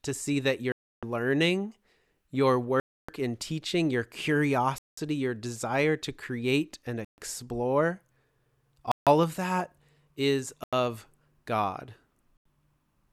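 Speech interrupted by seven dropouts where the sound cuts to dead silence and resumes where it stopped, at 0.72 s (about 0.31 s), 2.80 s (after "learning your", before "in teaching your"), 4.78 s (before "your desire to create"), 7.05 s, 8.92 s (before "of that is"), 10.64 s and 12.37 s, shrinking from roughly 0.3 s to under 0.1 s. The likely cause is a Bluetooth stall: delayed packets emptied the headphones' buffer, pausing playback until retransmissions arrived.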